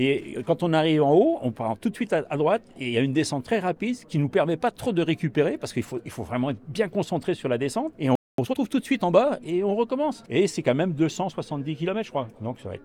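At 8.15 s the sound cuts out and the output goes silent for about 229 ms, until 8.38 s. This is a playback stall. The player likely ran short of data or had its thread blocked, so nothing reached the output.

From 8.38 s to 8.60 s comes time-compressed catch-up. The player clears its backlog by removing small slices and cross-fading across the gaps. The audio runs at twice normal speed without any pitch change.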